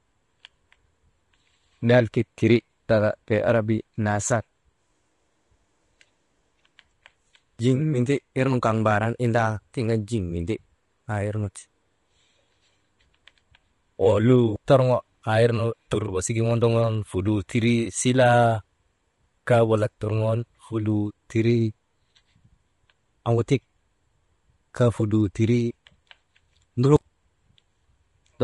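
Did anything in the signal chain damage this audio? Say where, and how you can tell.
Yes, at the codec stage, throughout the speech: the sound is rough and grainy, which points to low-delay AAC compression, likely AAC-ELD near 32 kbps. Its short frames blur pitch harmonics, so a spectrogram shows smeared harmonic lines, noise filling the gaps, and a thinned upper band.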